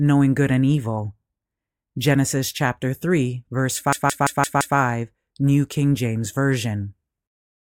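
From 3.93 to 4.78 s, a system hang loop occurs: the machine stalls while the sound hardware keeps replaying its ring buffer. A 170.67 ms slice, consistent with an 8192-sample buffer, repeats five times, producing a machine-gun stutter at about 5.9 Hz, with essentially nothing skipped.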